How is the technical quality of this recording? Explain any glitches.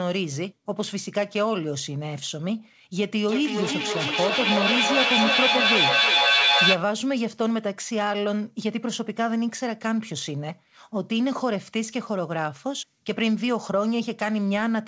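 The recording has one clear glitch: a feedback echo between two devices, from 3.28 to 6.96 s. The call path's audio stops at 8 kHz, which fits a wideband codec such as G.722.

In that stretch, a second device in the same room plays back the call, and the first microphone picks it up again. Each echo canceller only removes its own device's playback, so the speech comes round again roughly every 300 ms, each time thinner and more ringing. The repeats pile up to about 5 dB above the speech instead of dying away. A spectrogram shows evenly spaced, stacked copies of the same patterns. The waveform swells through the passage rather than decaying.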